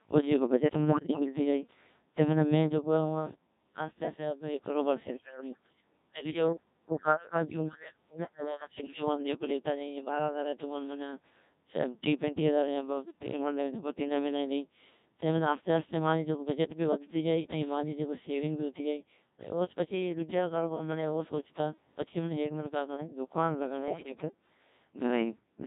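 The whole clip runs through a Codec 2 vocoder, and the heavy robotic buzz fits its 1.6 kbit/s mode. Only pitch, voicing, level and a rough spectral shape get sent, so the decoder rebuilds the speech from sine waves and the original waveform is gone. Then there are two stretches of bit errors on digital voice radio, from 0.89 to 1.2 s and from 23.88 to 24.11 s. Flipped bits, something like one in ten and then a bit worse, scramble the pitch, level and tone of a handful of frames, and the voice turns into warbly, bleepy gibberish.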